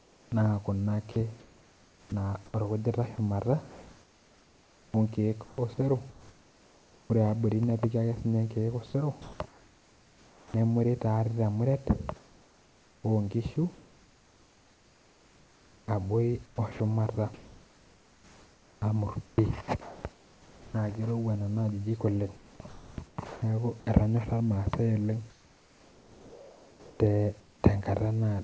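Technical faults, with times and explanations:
0.0–7.1 s, 12.16–20.74 s and 22.36–23.42 s, sound chopped by the voice detector. The speech keeps breaking up. Quiet syllables and word edges vanish and are filled with synthetic hiss. About 3.6 s is replaced in the first stretch, 5.7 s in the second and 0.82 s in the third. The sender's voice detector likely kept switching transmission off and on.
8.86 s, sound dropped by the voice detector. For 80 ms the speech stops and steady noise or near silence takes its place. About 60 ms of actual sound is lost. It is a short gap, then the voice returns. The sender's detector likely judged this quiet part to be background and stopped sending. The receiver played comfort noise until sending resumed.
8.86–10.54 s and 25.30–27.64 s, comfort noise in place of the background. The natural background drops out during these pauses. A smooth, even hiss takes its place for about 1.3 s in the first and 1.9 s in the second. 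It lacks the detail and movement of the real ambience. This is likely discontinuous transmission, with the receiver synthesising noise shaped like the background. The G.722 call path keeps everything under 8 kHz.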